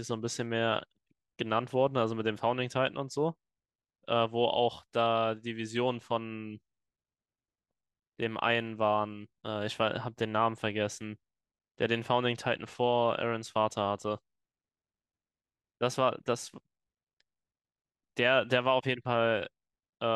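No technical faults are audible.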